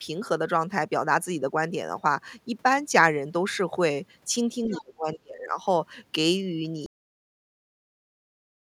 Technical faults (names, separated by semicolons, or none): speech suppressed in double talk; other side's voice leaking through; cut-off end